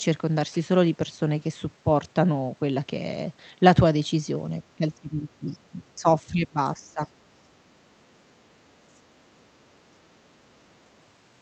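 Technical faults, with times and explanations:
4.64 to 5.89 s, 6.23 to 6.58 s, 6.76 to 7.11 s and 9.99 to 10.08 s, speech suppressed in double talk: the talker's level falls sharply and then recovers. It drops by about 25 dB in the first two stretches and about 15 dB in the last two. The longest stretch holds the dip for about a second. The likely cause is an echo canceller that heard both sides at once and turned everything down. This is different from a network dropout: the sound dips and returns in gated pieces rather than vanishing abruptly, and there is no repeated or smeared audio.
8.92 to 9.00 s, other side's voice leaking through: a brief scrap of a second voice appears, about 40 dB below the talker. It likely comes from the talker's own loudspeaker and was not fully cancelled at the microphone. It is separate from the Opus call path's 8 kHz band limit, which dulls everything evenly. 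This leak is a distinct, faint extra voice with its own timing, not a change to the talker's tone.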